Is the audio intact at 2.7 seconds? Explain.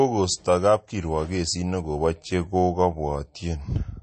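No, at 2.7 seconds the speech carries the same MP3 compression damage heard across the whole clip. Nothing sounds above about 8.3 kHz, and the sound is watery and swirly, which likely comes from a starved encoder near 32 kbps. Frame-to-frame dropping of weak frequency lines causes the swirl, which a plain low-pass filter would not.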